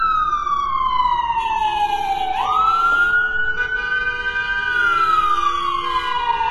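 Heavy, likely HE-AAC compression at a very low bitrate near 16 kbps rebuilds the treble from copied lower bands, so it sounds metallic and gritty throughout, with nothing above 11.8 kHz.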